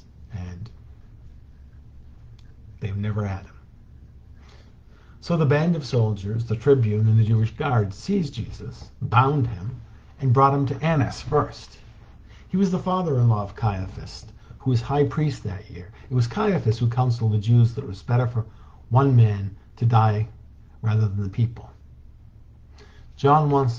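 The signal holds steady throughout the recording, with no audible technical fault at any point.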